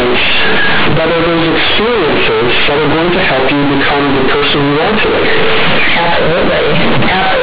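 Speech, with companded audio read as linear for its whole length: mu-law bytes are played back as plain 8-bit linear samples without expansion, so every sign change jumps across about half the output range. Quiet passages become as loud as peaks, giving a harsh, buzzy roar with heavy noise in the pauses. The waveform looks like a dense block with no dynamics, and the spectrogram shows dense broadband energy filling the band up to the 4 kHz edge of the telephone coding.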